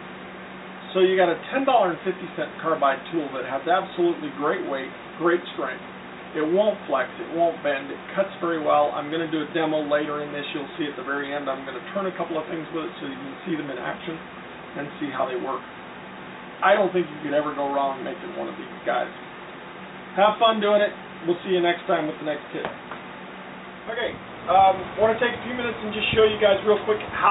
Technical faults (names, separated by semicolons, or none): none